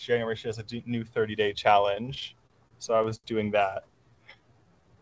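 Audio carried over a call path whose band stops at 8 kHz, consistent with a G.722 codec, shows two faults. From 2.06 to 3.26 s there are repeated stalls (stutter): twelve brief holds, the longest 70 ms, where the last sound is stretched until late packets arrive. Nothing is lost, which separates this from packet-loss dropouts. From 4.10 to 4.96 s a jitter buffer slow-down repeats pitch periods to rebuild its reserve, adding 141 ms and running at 85% speed. Pitch stays the same, unlike a slowed-playback fault.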